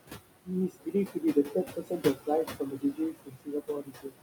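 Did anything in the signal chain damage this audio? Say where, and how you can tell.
Yes. Noise suppressor artifacts from call processing persist throughout: room noise about 9 dB below speech is cut by about 20 dB between phrases.

Speech cut by the noise suppressor appears at 0.69–2.28 s and 2.45–4.18 s. Roughly a second of quieter speech in each span is treated as noise, sinking by up to about 21 and 22 dB.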